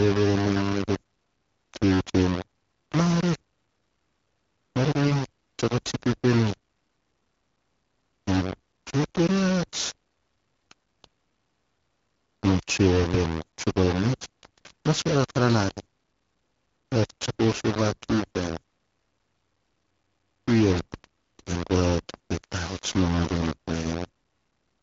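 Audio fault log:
Throughout: low bit depth without dither. The whole recording has a grainy, gritty distortion that moves with the speech rather than sitting underneath it as steady hiss. Quiet stretches and word tails break up or sputter between a couple of levels instead of fading smoothly. The likely cause is the signal being rounded to very few bits, something like 5, with no dither, so the error tracks the voice and sits only about 10 dB below it.
5.04 to 5.11 s: AMR bit errors. For roughly 70 ms the voice turns hoarse and gargly, with a scratchy edge, while pitch and loudness stay roughly where they were. It sounds like a few AMR wideband frames arrived with some of their less protected bits flipped, on the order of a few percent. The decoder then places its excitation pulses wrongly and gets the finer spectral and gain details off, so that brief chunk comes out mangled. The surrounding AMR-WB coding at 12.65 kbit/s sounds clear.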